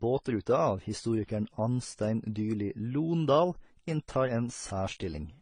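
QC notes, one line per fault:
Throughout: transcoding between lossy codecs. Speech carries several codec artefacts at once with a dulled top, likely from repeated AAC-type encodes, each adding artefacts to the last, which fits 32 kbit/s AAC-LC passes around a 48 kbit/s HE-AAC pass.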